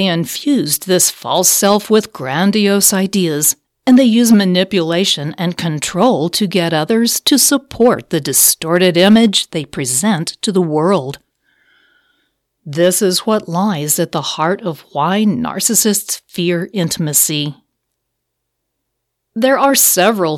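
Speech, with hard clipping throughout. The signal drives about 4 dB past what one stage can pass, so the loudest peaks are cut flat. Only a small fraction of samples hit the ceiling. The flattened tops add high harmonics, heard as crackle on loud syllables.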